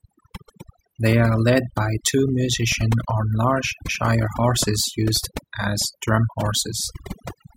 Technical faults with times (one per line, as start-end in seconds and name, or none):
0.00-7.56 overdone noise removal